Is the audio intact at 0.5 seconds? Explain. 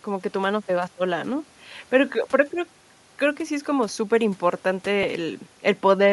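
No. At 0.5 s, as throughout the clip, the speech carries plainly audible Bluetooth LC3 compression damage, likely from that codec at a rate around 48 kbps in 10 ms frames. Discarded upper-spectrum detail is replaced with shaped noise, giving a breathy, grainy edge.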